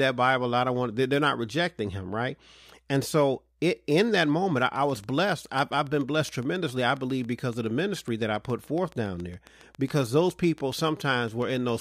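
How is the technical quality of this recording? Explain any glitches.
The recording is marred by a train of clicks. It starts at 4.61 s, just after "so it in that", and runs to 11.70 s. There are some fifty clicks at a steady 7.2 per second. Each has much the same sharp shape, and they peak roughly as loud as the speech. The likely cause is electrical interference or a faulty connection or power supply injecting repeated pulses. They tick over the speech and through the pauses.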